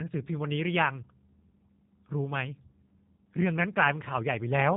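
Throughout, a G.729 codec rebuilds the speech from a filter model and sparse pulses, removing everything above 4 kHz and leaving a plainly rough, synthetic sound.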